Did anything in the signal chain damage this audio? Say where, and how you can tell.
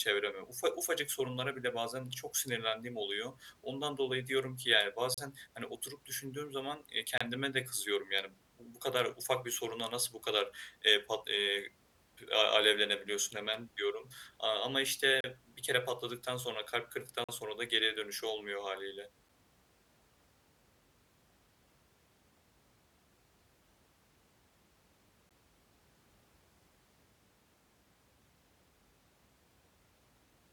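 Yes. Brief hard-edged dropouts of silence cut into the speech at 5.14–5.18, 7.18–7.21, 15.21–15.24, 17.24–17.29, 19.29 and 25.3 s, always on 2-second boundaries. This is a gap between stream segments at playback: misaligned timestamps leave holes the player pads with silence.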